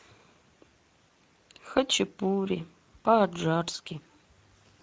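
Speech that sounds noisy and hoarse throughout, the marks of Speex codec compression, with coding damage plainly audible at a rate that fits roughly 17 kbps.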